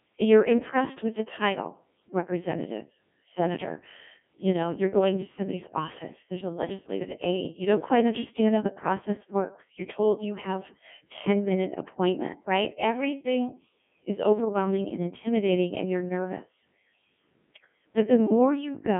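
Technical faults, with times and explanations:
Throughout: Codec 2 vocoder. The speech is robotic and buzzy, with heavy damage across the whole clip. The sound is carried in a narrow line band of about 150 Hz to 3.4 kHz, with nothing above 3.6 kHz. The degree of smearing fits a low-rate mode around 1.6 kbit/s. The decoder does not keep the original waveform. It resynthesises the speech from sine waves using only pitch, voicing, energy and a coarse spectral envelope, so natural texture is replaced by a mechanical buzz.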